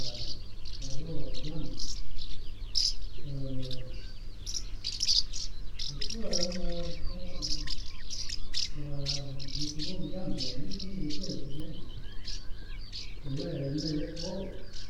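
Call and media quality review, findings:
Damaged data in a compressed stream: brief blip at 11.60 s. Stream data fault; corrupted frame bytes break frame sync, so the decoder misreads the frame and resynchronises. On a spectrogram, a thin broadband vertical streak; on the waveform, a few-millisecond discontinuity.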